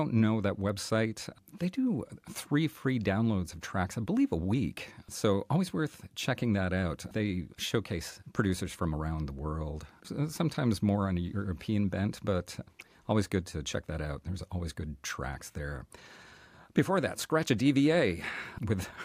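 Clock slip clicks run from 0.27 s to 18.78 s: faint, evenly spaced ticks roughly every third of a second, around seventy across the speech. Each is a single-sample jump. The likely cause is two devices running on independent clocks with nothing locking them together, drifting apart by something like 70 ppm. Every time that drift adds up to a whole sample, one sample is dropped or repeated, which produces the steady tick pattern.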